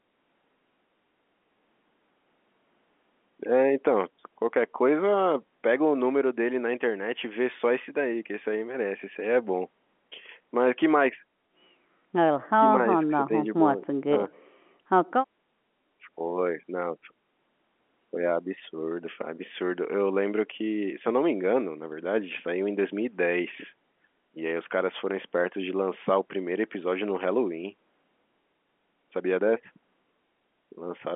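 No faults are audible in the speech, and the band limit of 200 Hz to 3.4 kHz is simply the G.711 telephone coding at work.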